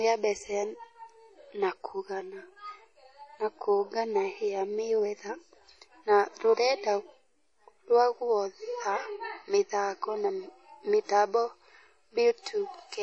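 The whole clip has a washy, ringing smear with breathing hiss and nothing above 10 kHz, likely WMA compression at a low bitrate, something like 32 kbps.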